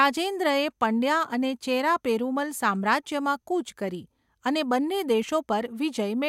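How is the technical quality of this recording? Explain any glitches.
No glitches or faults can be heard in this recording.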